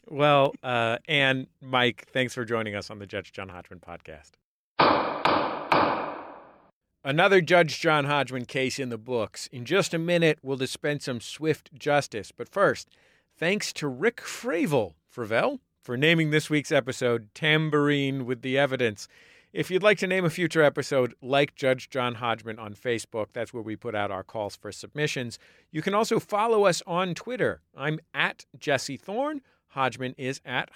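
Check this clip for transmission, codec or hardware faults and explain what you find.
Two sharp clicks in the speech, at 0.45 s and 8.92 s, are likely dropped samples: a tiny fraction of a millisecond lost, so the waveform jumps abruptly, producing a brief click.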